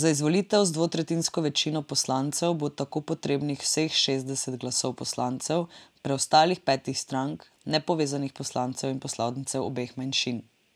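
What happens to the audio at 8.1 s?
Nothing goes wrong at 8.1 s; the speech carries on intact through that moment, with no dropout, click or distortion.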